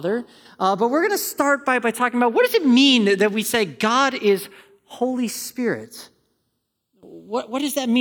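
From start to finish the channels drift apart, one clock running roughly 70 ppm fast, so the sub-millisecond offset creeps and the speech takes on slow flanging in mono.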